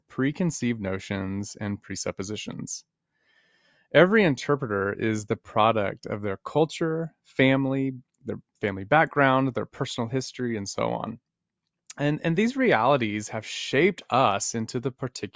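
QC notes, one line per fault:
No fault to note.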